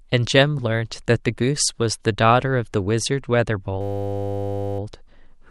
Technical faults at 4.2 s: system hang loop

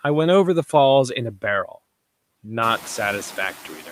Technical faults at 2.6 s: noise suppressor artifacts

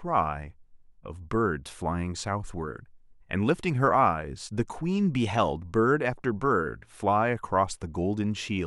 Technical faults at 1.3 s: none

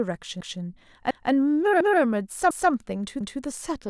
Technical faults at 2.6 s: overlapping chunks

